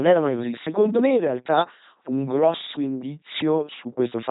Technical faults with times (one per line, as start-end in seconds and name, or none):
0.00-4.31 LPC-10 vocoder